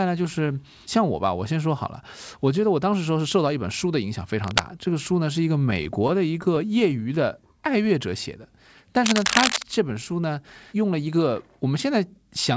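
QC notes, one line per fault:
4.44–4.60 s and 9.04–9.63 s, cable scratch noise: dense, uneven bursts of rustling noise ride over the speech, the first at about the speech level and the second about 5 dB above it. The likely cause is a worn cable or connector being moved. Unlike codec noise, it comes and goes in irregular, gritty bursts.
5.60–7.18 s, repeated stalls (stutter): 14 short hangs, none longer than 18 ms, where the last sound is held until fresh audio arrives. They add 143 ms in total and nothing is lost. The speech drags in jerks rather than stretching smoothly.
7.53–8.11 s, jitter buffer slow-down: the speech plays at 91% speed with unchanged pitch. Pitch periods are repeated to build up a reserve, adding 58 ms, so sounds are drawn out evenly. Unlike the stutter, there are no hard catches or holds.
10.44–11.09 s, jitter buffer speed-up: the speech runs at 106% speed with unchanged pitch and sounds slightly hurried. 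Around 50 ms is trimmed by removing short pitch-period pieces to cut the delay. Unlike dropouts, no gaps or clipped syllables are heard.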